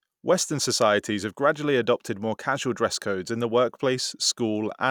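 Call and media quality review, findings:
Nothing stood out on listening to this speech recording.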